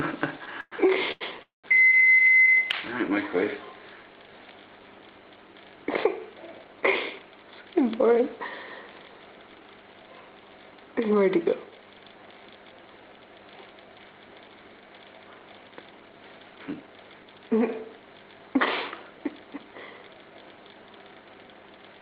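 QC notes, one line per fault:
0.45–1.23 s, repeated stalls (stutter): three brief holds, the longest 110 ms, extend the last sound as the buffer keeps emptying. The sound drags in stops and starts, but nothing is lost.
1.43–1.66 s, call audio freeze: a single 210 ms hold fades into about 150 ms of silence before resuming where it stopped. This is likely a delay jump on the network path, unlike the repeated short stutters before it.
15.91–16.82 s and 21.11–22.01 s, jitter buffer speed-up: playback runs at 112% and 113% at unchanged pitch as roughly a tenth to a seventh of a second is trimmed away. It sounds hurried rather than gapped.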